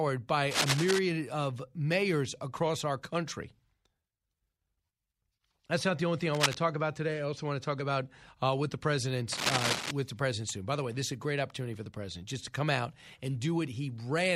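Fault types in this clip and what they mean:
Cable scratch noise: Dense, uneven bursts of scratching noise sit over the speech, roughly as loud as the speech itself. They occur from 0.51 to 0.99 s, 6.34 to 6.57 s and 9.32 to 9.91 s. The likely cause is a worn cable or connector being moved.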